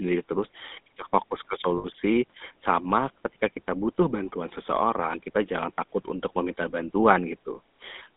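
Speech heard through the GSM full-rate codec for its whole length, with a line band of roughly 200 Hz to 3.7 kHz. The codec models the vocal tract and drives it with a sparse, regularly spaced pulse excitation, which gives the plainly audible buzzy, gravelly roughness, consistent with 13 kbps GSM full rate. On a spectrogram the energy stops sharply near 3.7 kHz and thins below 200 Hz, and the harmonics look grainy and smeared. Lost GSM frames occur from 1.78 to 1.86 s, a 60 ms gap that fits three dropped 20 ms frames. The decoder repeats the last good frame's settings, so the sound freezes into a short metallic ring. A spectrogram shows a brief flat, repeated band in place of moving speech, and the waveform shows a repeating pattern.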